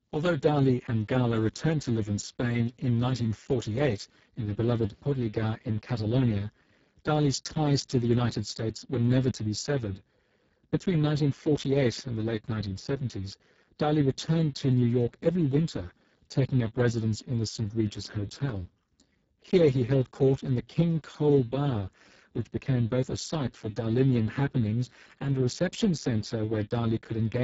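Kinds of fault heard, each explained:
Speex codec: The whole clip has passed through Speex, a CELP speech codec from older VoIP and game chat, here at a low setting that points to roughly 6 kbps. So few bits are left for the excitation that the speech sounds heavily damaged. It is noisy and hoarse, edging toward robotic. Nothing is heard above about 7.7 kHz. The upper band below that limit carries only a shaped, noise-like fill rather than real detail.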